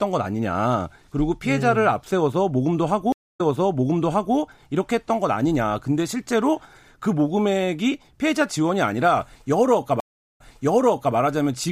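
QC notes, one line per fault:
3.12–4.36 s and 10.00–11.15 s, stream reconnect: twice the connection broke, leaving silences of 243 ms and 369 ms. A fresh decoder then started mid-stream on a server-resent burst, so the speech resumes 0.99 s and 0.78 s earlier, repeating material already heard.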